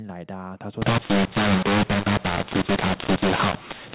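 A mu-law and A-law mix-up runs from 0.82 s to the end. The telephone speech was coded with mu-law but decoded as A-law, so levels are scrambled: speech grows harsh and distorted, quiet samples jump well above silence, and pauses fill with noise.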